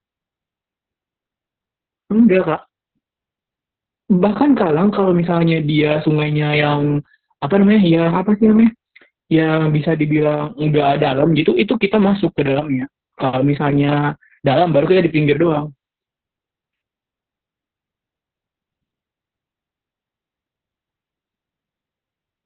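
Throughout the speech, heavy Opus voice compression in its narrowband SILK mode leaves it muffled, hoarse and faintly robotic, which points to a very low bitrate near 6 kbps. A spectrogram shows an empty band above 4.5 kHz and smeared, blocky harmonics below.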